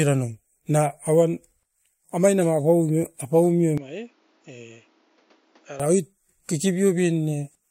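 Input switched to a poorer device, 3.78 to 5.80 s: with no gap, the speech turns dull, loses everything above 7.2 kHz, drops about 10 dB and gains new background noise about 30 dB below the speech. A lower-grade microphone likely took over, then handed back.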